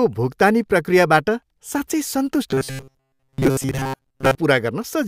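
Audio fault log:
2.51–4.36 s, robotic sound from repeated short buffers: after "भुक्तानी प्रक्रियाबाट साँच्चै" speech becomes a rigid metallic buzz at 133 Hz, likely because most audio is skipped while a chunk of about 7.5 ms is replayed. The spectrogram shows even 133 Hz harmonic bands, and the waveform shows identical repeating cycles.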